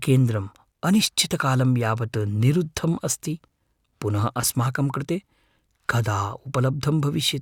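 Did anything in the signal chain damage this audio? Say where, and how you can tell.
No, nothing stood out on listening to this speech recording; no stage of the signal chain left any audible damage.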